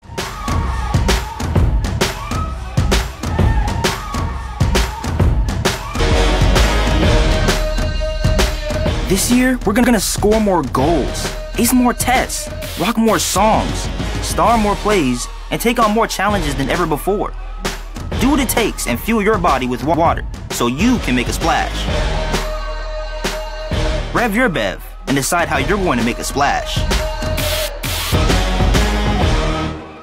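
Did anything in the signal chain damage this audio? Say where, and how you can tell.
Yes. Overlapping chunks appear at 9.84 to 9.94 s and again at 19.94 to 20.04 s, where a 100 ms stretch of sound plays twice, heard as a short stutter at each join. The spacing of about 10 s points to the buffer or chunking stage: audio was processed in 10 s blocks, and each new block began 100 ms before the previous one ended, so the overlap was replayed rather than trimmed.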